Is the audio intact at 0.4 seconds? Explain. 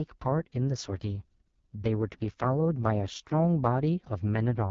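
No. At 0.4 s the AMR wideband (HD Voice) codec damage is present, as it is across the whole clip. The speech is rebuilt from a pulse-excited vocal tract model that encodes only up to 6.4 kHz, with the band above filled by shaped noise and nothing above about 7.3 kHz. Here the coding is heavy, which fits the lowest 6.6 kbit/s mode, so the speech sounds rough and raspy, with a grainy, buzzy texture.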